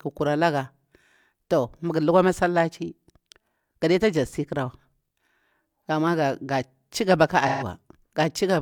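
From 7.48 to 7.64 s, AAC frame loss with concealment leaves a smeared, noisy patch where the decoder reused the previous spectrum. A spectrogram shows blurred harmonics, which fits roughly three lost frames.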